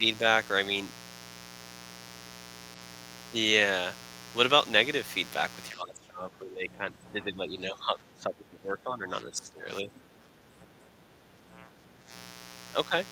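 A steady, raspy buzz runs under the entire clip, roughly 20 dB below the speech. This is mains buzz: sharp spikes from 60 Hz mains spreading harmonics upward. From 5.7 to 12.11 s, the speech sinks by up to around 15 dB. This is likely speech suppressed in double talk, where the echo canceller turned the talker down during overlap.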